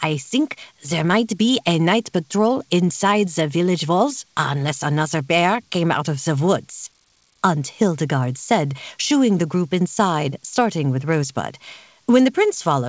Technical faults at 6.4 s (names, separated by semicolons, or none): none